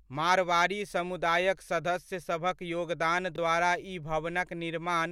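At 3.32 to 3.38 s the speech jumbles briefly: chunks out of order. One 20 ms chunk arrived late and plays two chunks after its proper place, so three chunks of audio are shuffled across this span, leaving three hard joins at the seams. It differs from a dropout or a repeated chunk because nothing is missing and nothing plays twice. The same sound is present, just in the wrong sequence.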